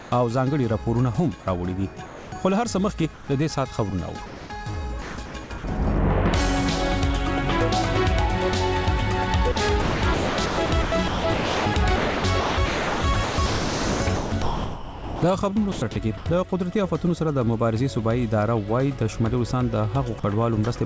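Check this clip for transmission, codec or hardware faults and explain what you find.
Voice-detector faults run through the clip, all filled with synthetic comfort noise, over a call path whose band stops at 8 kHz, consistent with G.722 at 64 kbps.

From 0.00 to 0.12 s, comfort noise stands in place of the background. With no activity detected, the sender likely stopped transmitting and the receiver generated shaped noise instead. The real background, sitting about 20 dB below the loud parts, becomes a flat, textureless hiss, only about 1 dB different in level. Unlike a dropout, no sound is missing here; only the background's detail is gone.

Sound dropped by the voice detector occurs at 2.06 to 2.32 s, 3.14 to 3.28 s, 4.26 to 4.50 s and 20.20 to 20.24 s. Each time the detector likely misjudged quiet sound as background and cut transmission, so roughly 110 to 200 ms of sound vanishes into steady noise before returning, and 40 ms in the last case. 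What separates these from packet loss is the fill: smooth noise, not silence, a click or a repeated fragment.

Sound chopped by the voice detector spans 5.02 to 5.64 s and, much longer, 9.52 to 16.26 s, where about 4 s in total is replaced. Here the detector likely toggled repeatedly, so soft edges and quiet parts keep dropping out. The result is stuttering. Compared with a single drop, the repeated on-off switching within one stretch is what marks it.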